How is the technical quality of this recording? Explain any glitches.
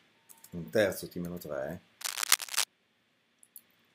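One glitch stands out: cable scratch noise from 2.01 to 2.66 s, an irregular rustling burst about 5 dB above the sound, likely from a worn connector shifting contact, denser than isolated clicks.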